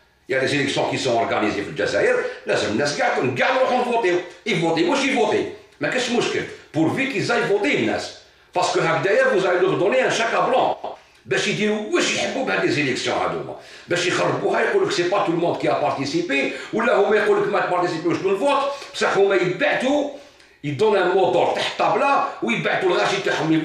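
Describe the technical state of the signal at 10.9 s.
At 10.9 s the audio is inside a frames-out-of-order fault running from 10.73 to 10.95 s. Two adjacent runs of frames reached the decoder swapped and were played in that wrong sequence, each block about 104.5 ms long, which fits runs of four frames apiece. The stretch plays with its two halves exchanged, heard as a brief garbled flutter. No time goes missing.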